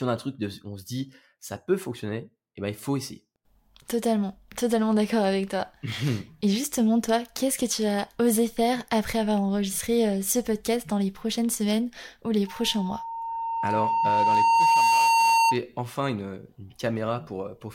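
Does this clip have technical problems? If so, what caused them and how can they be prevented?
Yes. A loudspeaker feedback squeal runs from 12.47 to 15.59 s. The microphone re-amplifies its own loudspeaker until a 913 Hz tone swells over roughly two seconds to a few decibels above the speech. On a spectrogram it is a bright horizontal line at 913 Hz, and the waveform envelope balloons. Placing microphones behind the loudspeakers and lowering the gain, or notching 913 Hz, keeps the loop below unity.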